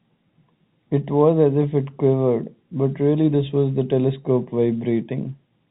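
No technical faults occur in this speech; it has the narrow, telephone-band sound of G.711 A-law coding.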